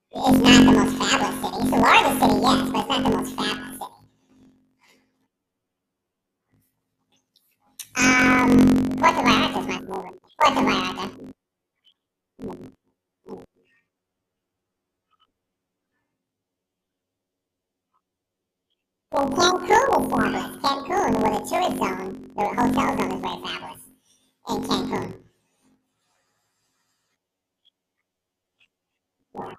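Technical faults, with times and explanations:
Throughout, planar audio read as interleaved: the stereo stream arrives as blocks of all left samples followed by all right samples, but playback treats them as alternating left-right pairs, so each block of about 21.8 ms is squeezed into two halves played back to back at double speed, an octave up. At this short block length, the speech is chopped at roughly 46 Hz, giving a robotic buzz rather than a clear octave shift.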